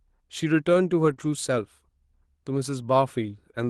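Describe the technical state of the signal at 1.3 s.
Around 1.3 s the sound has just come out of a short rough, noisier stretch running from about 1.18 s to 1.28 s, where the texture turns grainy for roughly 60 ms without any silence or dropout. This is a lost packet rebuilt from error correction: a few separate Opus packets went missing, which fits three separate 20 ms packets, and the decoder filled the hole from the low-bitrate backup copies carried in the following packets, so the span plays continuously but coarser.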